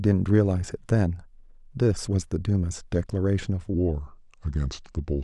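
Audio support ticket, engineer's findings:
Speech from 3.74 s to end drops deep and slow, pitch down about four semitones; section at the wrong speed, played at 0.806x, likely a clock or resampling mismatch.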